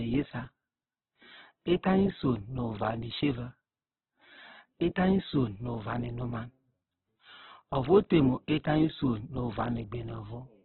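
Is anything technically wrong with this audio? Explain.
Yes, there's heavy codec damage across the whole speech clip. It sounds rough and grainy, with nothing above about 4.1 kHz. That's likely Opus compression at a very low bitrate, near 8 kbps, where the encoder narrows bandwidth and fills starved bands with noise.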